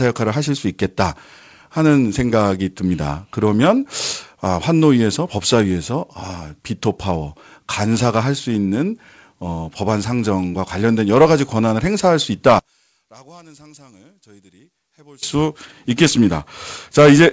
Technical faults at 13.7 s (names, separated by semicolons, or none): one channel inverted